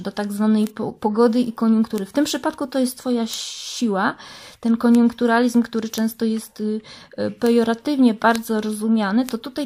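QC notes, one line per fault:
0.67, 1.98, 3.34, 4.95, 5.98, 7.47, 8.36 and 9.29 s: bit error spikes. Each is one sharp tick, a sample or a few long. A flipped bit makes the value jump by a power of two and snap back. So the click is broadband and unrelated to the sound.
1.15 and 3.19 s: corrupt frames decoded. The decoder played damaged compressed data anyway. Energy lands at wrong frequencies as a brief chirp, blip or noise burst. It peaks at about -25 dBFS, then about -30 dBFS. The first points to one damaged frame, the second to a few.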